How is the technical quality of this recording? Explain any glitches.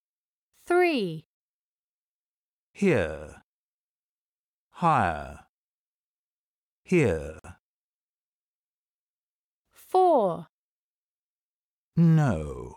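There is one glitch. At 7.39 to 7.45 s there is a gap between stream segments. The segment timestamps leave a 50 ms hole, which plays as silence with hard edges. No audio is lost.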